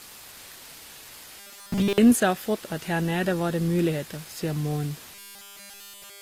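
Robotic sound from repeated short buffers affects this speech twice, from 1.39 to 1.98 s and from 5.15 s to the end of the clip at 6.21 s. In both stretches the voice turns into a rigid metallic buzz fixed at 200 Hz that only roughly tracks the talking. Essentially none of the real audio gets through. The likely cause is new audio arriving too seldom, so playback keeps looping the last fragment, and a 200 Hz buzz fits a repeated slice of about 5 ms. Low bit depth with dither runs through the whole recording as a steady, even hiss with no distortion, sitting about 20 dB below the speech. This points to a signal rounded to roughly 6 bits, with dither added first so that the rounding error becomes uniform white noise rather than grit tied to the signal. Throughout the clip, two different flavours of coding artefact are layered on top of each other. That combination likely comes from transcoding between lossy codecs, consistent with a low-rate HE-AAC stage around 24 kbit/s followed by Opus around 48 kbit/s. 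The second encoder wastes bits reproducing the first one's damage and adds its own, while the lowest bandwidth limit in the chain carries through to the final file.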